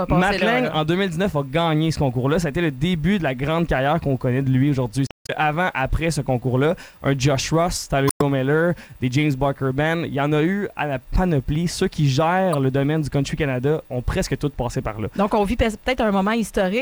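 Damaged data in the compressed stream makes the decoder misread frames and lose sync, causing brief glitches at 5.05–5.30 s, 8.07–8.22 s and 12.53–12.55 s.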